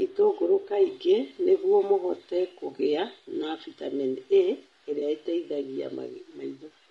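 Low-delay AAC compression runs through the whole speech clip. The voice sounds rough and grainy, with noise between the harmonics and a thin, synthetic top band. This is likely AAC-ELD's short frames resolving pitch poorly, which fits a bitrate around 32 kbps.

AAC frame loss with concealment occurs at 0.61–0.64 s, just before "kaingĩ nĩguo mũhote"; at 2.77–2.80 s, between "itũngũrũ kaingĩ nĩguo mũhote" and "na bitamini"; and at 4.99–5.02 s. Each gap fits one lost 20 ms frame, which the decoder patched from the previous spectrum, leaving a brief smeared, phasey blip.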